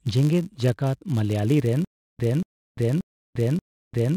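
From the very start, a filter restarted on every block: its state is discarded at each block boundary, so each block opens with a small transient. Across the whole speech recording this forms a 100 Hz buzz, ticking at the block rate and rising and falling with the signal's level.

At 1.85 s a stutter with silent gaps begins and runs to the end, likely from playback stalling and replaying its last fragment on each retry. A 235 ms burst repeats four times, each followed by 346 ms of digital silence, giving an even 581 ms cycle. The audio that should have filled that time is lost.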